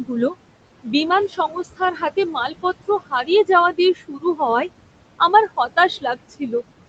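Noise suppressor artifacts run through the whole recording. The suppressor pulls the steady room noise, which sits only about 13 dB below the speech, down by about 21 dB in the gaps, then lets it back up under each phrase. On a spectrogram the noise floor shows as a speckled, gated texture that brightens behind speech, with the spectrum ending at the call path's 8 kHz band limit.

Speech cut by the noise suppressor follows in five places: 1.28 to 2.17 s, 2.33 to 2.65 s, 2.88 to 3.29 s, 3.73 to 4.4 s and 6.01 to 6.53 s. Each time the suppressor misread quiet speech as noise and ducked it by about 15 to 19 dB. The deepest drop comes in the 3.73 s stretch. The affected speech sounds swallowed or faint. The longest losses, nearly half a second each, fall in the first and fourth spans. The waveform shows sudden dips in the envelope, and the spectrogram shows faint, blanked-out patches within the speech energy.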